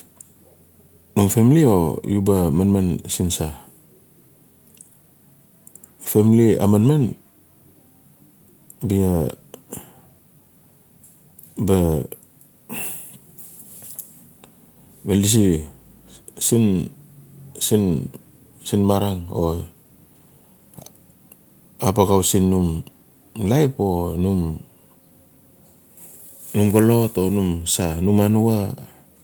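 A speech recording with nothing technically wrong with it.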